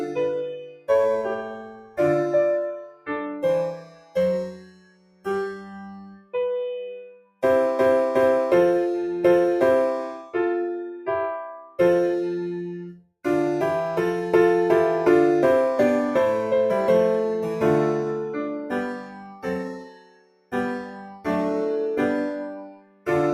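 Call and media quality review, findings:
Noise suppressor applied to music or sounds, whole clip: level pumps and flutters, swinging by about 15 dB. Probable component: speech-tuned noise suppressor left active on non-speech audio. It treats steady tones, ambience and reverb as noise, so attacks pass while held sound and tails thin out. Unlike compressor or AGC pumping, gain follows steadiness rather than loudness.

Sound cut by the noise suppressor at 0.09–1.99 s, 2.75–6.35 s, 7.1–7.43 s, 10.91–11.79 s, 12.92–13.25 s, 18.58–21.27 s and 22.48–23.08 s: sustained or decaying sound sinks, by up to about 20 dB, and decays are cut short. Same suppressor misclassifying these passages as noise. Unlike a dropout there is no hard gap, and onsets stay intact.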